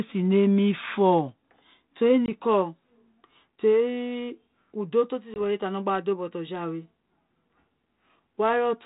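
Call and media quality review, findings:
Packet loss on an ADPCM call, 2.26 to 2.32 s: 20 ms hard-edged dropout to silence, about one packet. Speech re-enters slightly distorted while the decoder's predictor and step size resynchronise. Repeat at 5.34 to 5.41 s with the same 20 ms gap and recovery transient. The band-limited G.726 path underneath has the light noise floor expected near 32 kbit/s.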